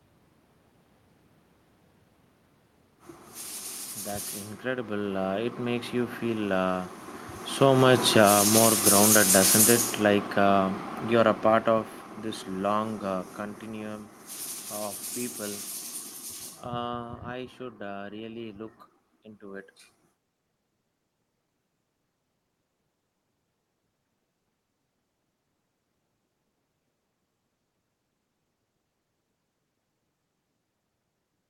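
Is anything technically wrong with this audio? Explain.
Yes. The automatic gain control judged the input too loud, or its background noise too strong, and lowered its gain gradually, by about 9 dB from 7.46 to 11.98 s, then by about 7 dB from 12.54 to 14.24 s. Each time the speech sinks steadily, and the room noise falls with it.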